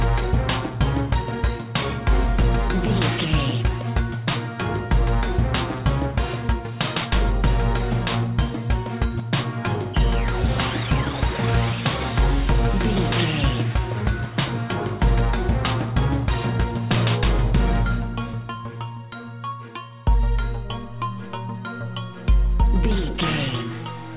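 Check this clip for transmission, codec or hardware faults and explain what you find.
One fault runs through the whole clip: aliasing. The audio was resampled down without an anti-aliasing filter, which fits a drop from 44.1 kHz to 8 kHz. Everything above the new 4 kHz limit was never removed, so it folds back around 4 kHz onto unrelated lower frequencies, sitting roughly 15 dB below the wanted signal. That lends hissy and bright sounds a gritty, metallic edge, and the spectrum runs hard right up to the 4 kHz edge.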